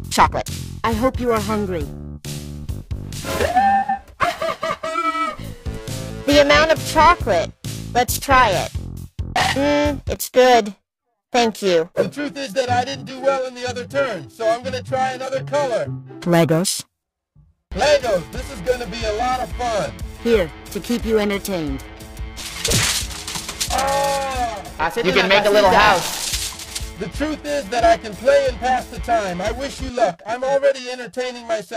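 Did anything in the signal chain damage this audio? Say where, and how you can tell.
Yes. The damage sits at the converter, where the sampling clock is being shaken by periodic clock jitter at a rate of around 1 kHz, present from start to finish. Each sample is taken slightly early or late in a regular cycle, so every component of the sound picks up sidebands spaced about 1 kHz above and below it, stronger on high-frequency content. The result is a rough, metallic edge riding on the audio that disappears whenever the sound stops.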